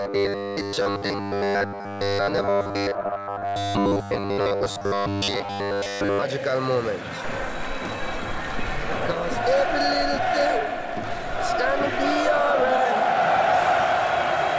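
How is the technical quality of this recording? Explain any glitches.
The first six seconds have a clear defect: robotic sound from repeated short buffers, running from 0.01 to 6.23 s. Through this stretch the audio collapses into a rigid, metallic buzz at 100 Hz that only loosely tracks the original sound. The likely cause is audio arriving too infrequently, with playback filling the gaps by looping the last 10 ms chunk. That repetition imposes a fixed 100 Hz pitch, and roughly 70 percent of the signal is repeated material rather than new audio. The whole clip also shows a call-codec path with nothing above 8 kHz, consistent with wideband coding such as G.722.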